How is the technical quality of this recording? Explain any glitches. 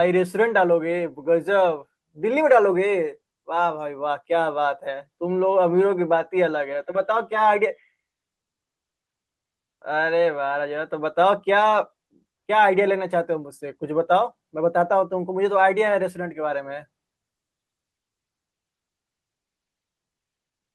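No glitches or technical faults can be heard anywhere.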